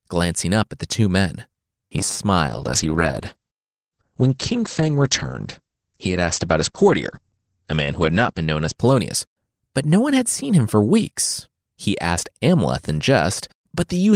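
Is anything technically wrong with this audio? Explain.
Yes, there are two faults.

From 1.86 to 2.24 s the speech turns into a rigid, metallic buzz pitched at 100 Hz, still loosely following the speech but flattened onto that fixed tone. This is robotic sound from repeated short buffers, and the likely cause is new audio arriving too late, so the playback side kept replaying its last short buffer. A 100 Hz buzz fits a buffer of about 10 ms. Roughly two-fifths of that stretch sounds like repeats, with the real audio in between skipped.

From 2.49 to 9.75 s the speech goes muffled and rough, losing its top end as the audible bandwidth shrinks from 20 kHz to 8 kHz, and stays at its worst for about 5.7 s. This is a call bitrate drop: the call's bandwidth estimate fell and the Opus encoder was told to spend far fewer bits. The coarser coding and the missing highs point to a fall from about 32 kbps to around 9 kbps, and the sound recovers when the rate comes back up.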